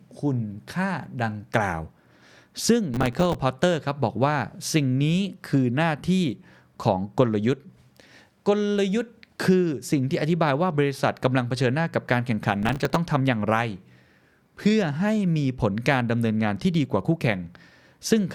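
From 2.94 to 3.35 s and again from 12.63 to 12.96 s, processor overload crackle tears through the speech. The processor repeatedly missed its deadlines for buffers of a few milliseconds, around twenty times in each burst, replaying stale audio with hard edges that sounds gritty.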